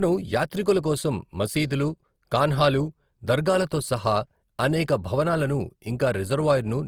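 Low-bitrate audio saved at a high bitrate, throughout the speech: coarse, smeared detail fits a 24 kbit/s Opus stage, likely re-encoded afterwards as high-bitrate MP3.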